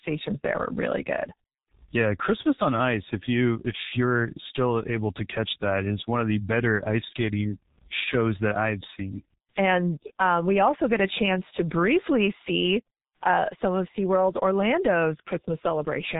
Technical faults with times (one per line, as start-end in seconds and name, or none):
0.00-16.19 G.723.1 codec